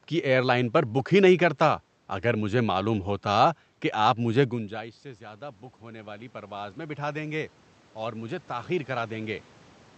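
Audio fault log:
4.5–9.49 s, automatic gain rising: after "ہوتا کہ آپ مجھے" the input drops about 20 dB as the talker moves back, and the gain control slowly climbs about 12 dB to compensate, so voice and room noise swell together over five seconds.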